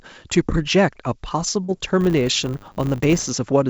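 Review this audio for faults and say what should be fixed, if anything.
At 1.64 to 1.70 s there's a short concealed packet loss: roughly 40 ms of audio didn't reach the decoder in time, so the receiver faked it by carrying the preceding sound forward for about 42 ms before crossfading back into real audio. You hear it as a quick smear or wobble, and anything short in that window can get swallowed. A deeper jitter buffer or forward error correction on the link should stop it.

From 2.01 to 3.31 s there's a filter restarted on every block. Some filter in the chain is dropping its state at each block boundary and starting again from zero, so every block opens with a small transient. Those transients repeat at 100 Hz, which fits 10 ms blocks, and build into a buzz that rises and falls with the level of the sound. Because the audio runs through G.722, it's heard against a band that stops at about 7 kHz. 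Keeping the filter's state from one block to the next fixes it.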